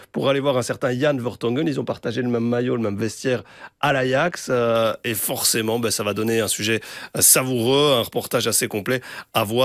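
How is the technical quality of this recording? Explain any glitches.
The second half of the speech has a clear tonal fault. From 4.75 s to the end, pre-emphasis is left on: a 75 µs FM treble boost wasn't undone, lifting 10 kHz about 13 dB above 1 kHz. The speech turns thin, bright and hissy-sibilant, and a spectrogram shows the upper bands suddenly denser.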